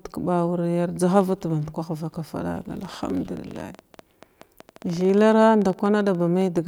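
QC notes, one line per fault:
2.85–6.58 s, train of clicks: some forty uneven ticks at 11 per second, at roughly speech level, likely from nearby-equipment interference; vertical spikes on waveform and spectrogram.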